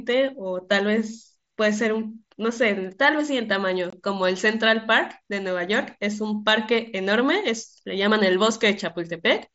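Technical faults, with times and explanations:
3.90 to 3.93 s, unconcealed Bluetooth headset packet loss: the speech drops out abruptly for about 23 ms, consistent with three lost mSBC frames filled with silence.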